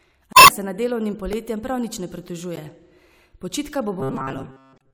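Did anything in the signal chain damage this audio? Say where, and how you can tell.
Yes. The compressed stream is damaged at three points: 0.30 to 0.50 s, ending just before "se nad"; 2.56 to 2.58 s, right after "prav nič ne"; and 4.75 to 4.82 s. Each is a blip where the decoder misreads frames and resyncs. A spectrogram shows smeared broadband or tonal smudges with abrupt edges.

The driver or buffer stage repeats a buffer at 1.33 s, just before "prav nič ne", where a tiny slice plays twice more, and again at 3.38 s, where it plays once more. These are consistent with a 64-sample buffer of about 1.3 ms. The waveform shows identical short copies with hard joins.

From 4.00 s to the end, the speech turns into a rigid metallic buzz at 133 Hz, one repeat every 7.5 ms, while it still loosely tracks the words. The likely cause is a starved buffer, with most of the audio replaced by repeats. 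A spectrogram shows an evenly spaced comb of 133 Hz harmonics.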